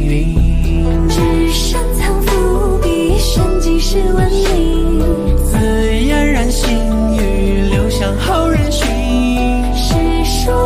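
Nothing on this recording registers as a technical fault at any point.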